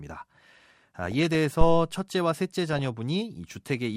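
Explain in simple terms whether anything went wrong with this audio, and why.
Two short stretches of the speech sound burbly, with little blips of noise mixed into the sound: from 1.04 to 1.35 s, and again from 2.73 to 2.86 s. This is DAB burbling. The radio signal was weak, so a small share of the digital data arrived damaged and slipped past the receiver's error correction. The damaged data makes narrow slices of the sound's pitch range blip or jump briefly in level, which is heard as that burbling.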